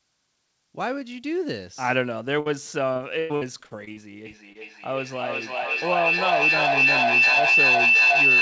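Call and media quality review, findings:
Burst of packet loss, 2.40–2.47 s: about 60 ms missing, last sound held and faded before resuming later. One isolated hole, unlike the choppy run that follows. Network/jitter buffer.

Repeated packet loss (robotic sound), 2.93–3.99 s: repeated holes patched by continuation, longest about 100 ms, roughly a third of the stretch synthetic. Sustained chop, not a single gap. Network loss.

Feedback howl, 4.26 s to end: tone around 3 kHz builds to about 7 dB above speech, pulsing roughly every 400 ms. Growth and pulsing mark acoustic loop between co-located devices, not codec tone.

Short concealed packet loss, 4.53–4.57 s: about 20 ms gap filled, heard as a brief smear or wobble inside the howl. Far shorter than the burst at 2.40 s. Late or lost packet.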